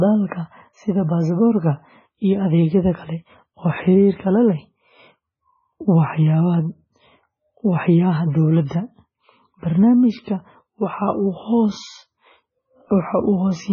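From start to finish the speech has a hard ceiling: nothing is present above 7 kHz, and what remains sounds heavily damaged, watery and swirling, with metallic chirps on s sounds and smeared consonant onsets. The likely cause is heavy MP3 compression at a very low bitrate, around 16 kbps, where the encoder cuts the treble and drops weak frequency lines that flicker from frame to frame. On a spectrogram this looks like a flat cutoff at 7 kHz and patchy, blocky gaps below it.

At 8.65 s a pre-echo appears, a short hiss lasting about 54 ms before a sharp attack. At 10.24 s a second one spreads about 32 ms ahead of another attack. In both cases the attack falls late in a transform block, so quantisation noise sized for the loud onset spills into the quiet moment before it. The onsets sound soft and smeared. On a waveform, low-level noise rises just ahead of each transient instead of the signal starting cleanly from silence.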